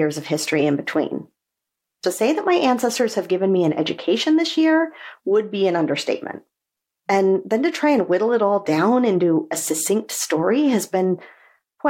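At 2.02 s and 10.08 s, pre-echo puts about 10 dB of hiss 10 to 13 ms before attacks, fitting 26 ms blocks. Unlike reverb, the hiss comes before the attack, not after.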